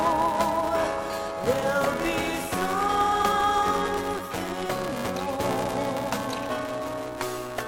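A steady 375 Hz buzz runs through the audio and rises and falls with its level, the sign of a filter restarted on every block, which fits 128-sample blocks.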